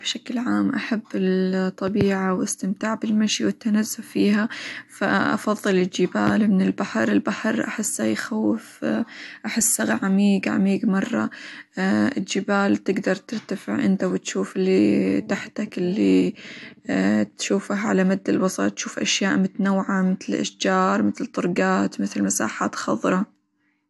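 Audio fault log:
Throughout, low-bitrate audio saved at a high bitrate: nothing above about 11.8 kHz and leftover smearing, likely from a low-rate earlier encode that the roomy MP3 can't undo.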